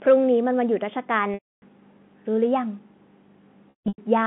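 At 1.34 s there's a packet loss with pitch repetition: a 280 ms hole, to 1.62 s, where the receiver keeps looping the last pitch period, so you get a held, buzzy tone that fades to silence before the speech cross-fades back in. It happens again from 3.70 to 3.98 s, but this time the loss is patchier, about 260 ms missing in scattered bits, with the longest unbroken run 160 ms. All of this sits over the narrow 150 Hz to 3.5 kHz band of the G.711 phone line.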